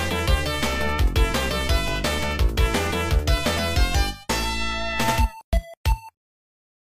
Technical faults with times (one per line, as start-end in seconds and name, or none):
3.53-3.58 damaged data in a compressed stream